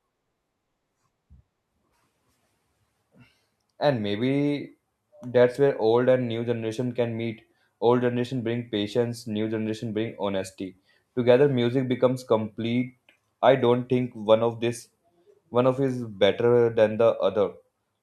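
No technical faults are audible.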